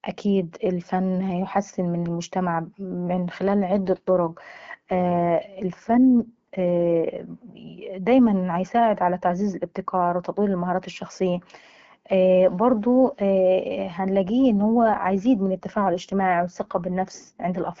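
Speech over an AMR-WB (HD Voice) link shows two AMR rate drops, at 3.85–7.24 s, just after "من المجتمع ممن خلال", and at 14.52–17.62 s. The band holds with no gaps, but the voice turns rougher and more synthetic, consistent with the network stepping the codec from 12.65 to 8.85 kbit/s to spend bits on error protection.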